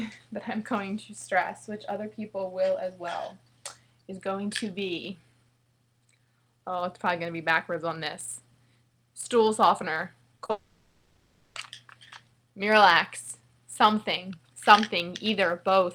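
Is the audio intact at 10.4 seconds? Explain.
No. Around 10.4 s the audio smears and wobbles briefly, at 10.37 to 10.41 s and again at 10.45 to 10.51 s. This is short concealed packet loss: about 20 ms and then 40 ms of data arrived too late, and the receiver filled each gap by extending the preceding sound before blending back in.

Underneath, a steady buzz near 92 Hz continues through this moment. It comes from a block size mismatch (truncated): one stage hands over longer blocks than the next reads, so each block's tail is discarded at that rate. The size difference is small enough that the speed-up is negligible.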